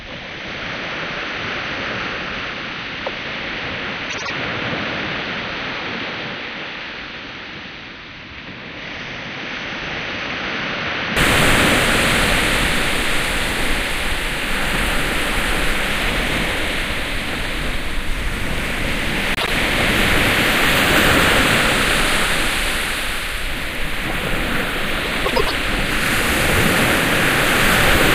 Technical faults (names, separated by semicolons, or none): input switched to a poorer device; frames out of order